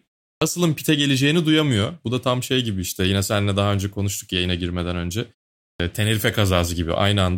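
At 0.35 s, after a 0.35 s pause, the speech resumes with about 65 ms missing, so "pite geleceğini duyamıyor" starts abruptly without its opening sounds. At 5.73 s, following "konuştuk yayına girmeden önce" and a 0.47 s pause, about 66 ms is lost the same way. This is a clipped start after a pause: the output path sleeps during silence and needs time to wake. On a waveform, each onset jumps from silence straight into speech with no rise. A spectrogram shows a hard vertical edge there. The muted pauses themselves sit cleanly at silence.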